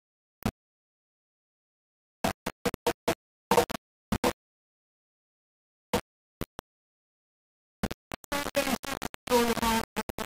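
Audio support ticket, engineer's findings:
Grainy, signal-tracking distortion for the whole clip; quiet passages break up into sputter or drop out. Low bit depth without dither, likely from rounding to about 3 bits. Quantisation error nearly as loud as the sound itself.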